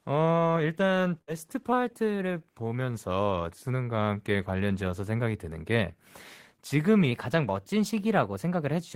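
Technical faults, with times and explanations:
1.21–1.30 s, burst of packet loss: the sound just before the gap is held and faded for about 60 ms as a decaying buzz or hiss, then the speech resumes roughly 60 ms further on. Unlike a clean dropout, the gap is filled rather than silent, and time jumps forward.
1.73–2.57 s and 7.11–8.95 s, drift correction step: the speech suddenly runs about 6.3% faster and about 105 cents (a semitone) higher, then snaps back at 2.57 s; the second stretch lasts to the clip's end. This is likely a clock-matching rate jump. Speed and pitch move together in a steady step, not a wobble.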